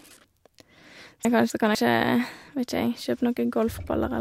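A speech clip with chunks out of order between 1.25 and 1.75 s: two 250 ms blocks play swapped, causing a jumbled moment with three hard joins.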